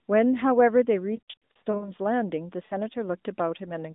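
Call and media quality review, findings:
Lost AMR speech frames, 1.16–1.92 s: choppy warble and short smeared dropouts over about 0.64 s, roughly 0.28 s missing in total, longest gap 60 ms. Points to scattered radio frame loss, with the decoder reusing the last good pitch and vocal tract settings at falling gain.

Lost AMR speech frames, 2.66–2.75 s: brief 40 ms dip and warble, consistent with two lost 20 ms frames. Same concealment, recovers quickly.

Narrowband AMR codec underneath sounds light on damage.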